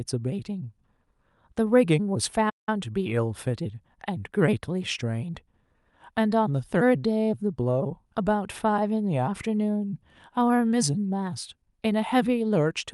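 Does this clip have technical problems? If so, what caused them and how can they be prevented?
Yes: the speech cuts to silence from 2.49 to 2.69 s, then resumes; a playback stall likely caused this, the player starving for data for about 177 ms. Larger playback buffers and an unblocked audio thread prevent it.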